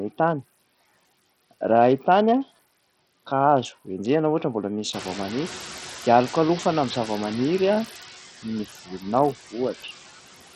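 Speech runs through a noise suppressor for the whole clip, and its work is audible. It pushes the steady background down by about 14 dB, frame by frame. The noise sinks in the gaps and swells back under the talking. Those are classic noise suppressor artifacts: the processor keeps deciding, band by band, what counts as noise. The whole clip also carries a gritty, coarse texture with aliasing riding on it. The treble is weak and unstable, and nothing is left above 13.6 kHz. The damage is heavy. The likely cause is Bluetooth SBC compression at a small bit pool, consistent with a rate around 64 kbps. The upper sub-bands get few or no bits, so the top end flickers out. The rest is quantised roughly, which brings the grit. Around 5 s the room noise, which belongs to the recording itself, jumps by about 15 dB. That exposes the noise suppressor catching up. From 4.92 to 5.67 s the louder background comes through with only about 4 dB of reduction. 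The suppressor's noise estimate still reflects the quieter level. Over those 750 ms it adapts, and the noise sinks back down. Later there is speech cut by the noise suppressor, from 8.85 to 9.05 s. The suppressor mistakes part of the talking for background. It turns that part down along with the noise, by up to about 15 dB. Roughly 150 ms of sound is affected. Those moments come out swallowed and faint, as if the talker dropped away briefly.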